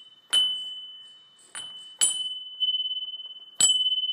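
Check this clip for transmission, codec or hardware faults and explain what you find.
One fault is audible: damaged data in the compressed stream. At about 2.60 s, a brief blip cuts through the sound. Corrupted bytes there made the decoder misread the frames. It lost sync and hunted for the next valid frame header, producing that short glitch.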